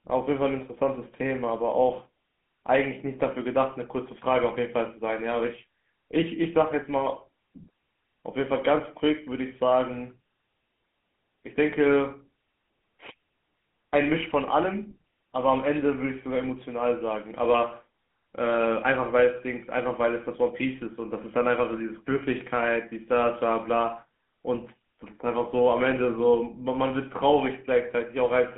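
GSM full-rate codec damage runs throughout the speech. The codec rebuilds speech from a vocal-tract model driven by coarse regular pulses, giving a plainly audible buzzy, gravelly roughness. The band is narrow, roughly 200 Hz to 3.4 kHz, with nothing above 3.8 kHz, which fits a 13 kbps stream.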